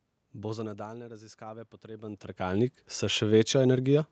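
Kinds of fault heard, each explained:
Automatic gain rising: the automatic gain control sensed the input dropping by about 18 dB as the talker moved away from the microphone, and it raised its gain gradually, by about 7 dB, from 0.33 to 3.55 s. The boost applies to everything the microphone picks up, so the speech and the room noise behind it swell together over those three seconds. The background creeps up audibly while the voice regains only part of its lost level.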